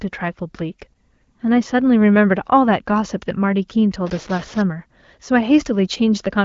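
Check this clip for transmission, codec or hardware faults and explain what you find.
One hardware fault stands out, carried over a wideband speech channel whose content stops near 7.5 kHz, which fits AMR-WB (HD Voice) at around 15.85 kbit/s.

From 4.07 to 4.62 s the speech turns distorted, and brief gaps fill with gritty noise. This is a stuck bit, likely from a broken data line or converter. One bit held fixed shifts roughly half the samples by its weight, following the waveform.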